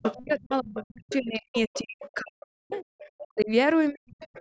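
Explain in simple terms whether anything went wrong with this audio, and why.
The talker's voice sinks, sometimes almost to nothing, from 0 to 2.84 s, then again at 3.21 to 3.5 s and 3.91 to 4.17 s. That is speech suppressed in double talk, likely because the echo canceller turned everything down while both people spoke at once.

A fainter second voice also slips in at 0.02 to 0.14 s, 0.77 to 1.15 s, 1.54 to 2.14 s, 2.99 to 3.45 s, and from 4.2 s to the end. That is the other side's voice leaking through, likely from the loudspeaker into the microphone where the echo canceller missed it.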